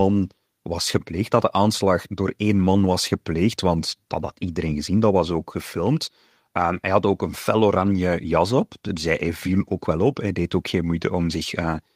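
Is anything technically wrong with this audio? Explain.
No, nothing technically wrong can be heard in this speech recording. No fault turns up anywhere in the audio.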